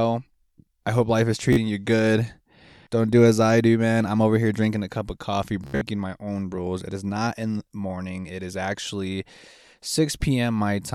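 Bluetooth stutter appears twice in this speech. At 1.53 to 1.57 s, after "I hope life is", about 44 ms of audio drops out. The receiver repeats its last short slice, which fits a few lost packets, and a brief buzz is heard before "you good". At 5.64 to 5.81 s, after "a cup of coffee", about 145 ms is lost across 174 ms, with the longest run at about 73 ms. The repeats form a machine-gun stutter. The speech then resumes at "my own rules", having skipped ahead.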